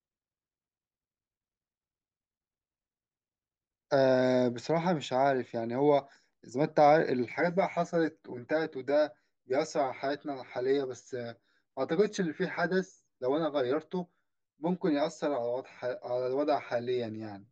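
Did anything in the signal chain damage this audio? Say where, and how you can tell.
Yes. Channel delay (comb filtering) starts at 7.32 s and runs to the end at 17.52 s. It is a driver or buffer stage fault. One channel lags the other by about 10 ms before the mono fold-down, cancelling the speech at notches from around 50 Hz upward, roughly every 100 Hz, which makes it sound hollow and phasey.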